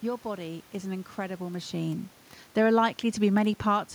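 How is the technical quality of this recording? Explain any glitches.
No technical glitches can be heard in the recording. Some background noise from the room is present throughout, and around a second and a half in the voice changes level as the talker shifts position relative to the microphone, both of which are part of the recording rather than system faults.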